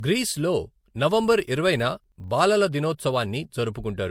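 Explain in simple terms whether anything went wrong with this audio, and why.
Two things went wrong in this speech clip.

Throughout, the sound is dull, with the highest sounds cut off. This is transcoding between lossy codecs, likely an MP3 copy later re-saved as Vorbis. Each save threw away detail and added its own flaws, and the damage stacked up.

From 1.04 to 2.36 s there is a low buzz at about 25 Hz. This is a filter restarted on every block. The filter forgot its state at each block and began again from silence. Each restart made a small tick, and those ticks repeat fast enough to become a buzz.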